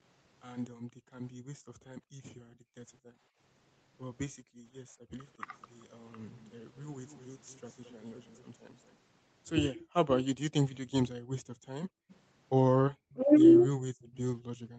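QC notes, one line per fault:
5.41–5.46 s, speech suppressed in double talk: For about 50 ms the speech level drops by roughly 20 dB, then recovers. The likely cause is the echo canceller hearing far-end audio at the same moment and failing to tell the local talker from loudspeaker echo, so it attenuated both. On a waveform this looks like a brief narrow pinch in the envelope. On a spectrogram it is a short vertical band where energy thins across the whole range.
7.06–7.28 s, 7.86–7.92 s, 8.29–8.43 s and 14.03–14.17 s, echo leak: Faint delayed copies of the sound trail the direct signal by 219 ms, at roughly 35 to 40 dB below it. This is likely residual loudspeaker pickup that the far side's echo canceller did not fully remove, which was then sent back. On a spectrogram, weak repeats of the preceding formant patterns appear shifted 219 ms later. The waveform shows only low-level ripples.
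11.2–11.3 s, background gated by the echo canceller: The room tone falls by about 40 dB for roughly 100 ms and then returns. The echo canceller clamped the microphone hard while the loudspeaker was active, then released it. The waveform shows the noise floor collapsing to near-flat. On a spectrogram this appears as a clean dark gap across all frequencies, which still stop at 8 kHz as they do in the rest of the clip.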